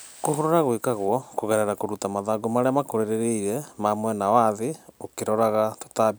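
No technical fault can be heard anywhere in the recording, and the signal holds steady throughout.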